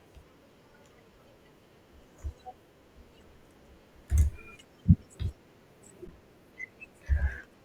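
At 4.07 s there's a tiny underrun with held sample: the output buffer ran dry for about 1 ms and the converter just held its last value, so the waveform flatlines briefly. At 6.08 s it happens again for 11.6 ms, a 512-sample gap, and roughly 10 ms of live speech went missing.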